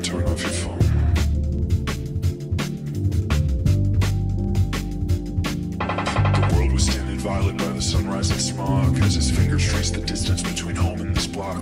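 No technical faults occur at any point in the clip, so there is nothing to describe in time order.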